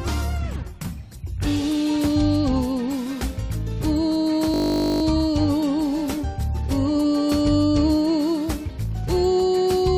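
From 4.54 to 5.02 s the audio turns into a steady 50 Hz buzz, a system hang loop in which a frozen system let the hardware replay one 20 ms buffer 24 times.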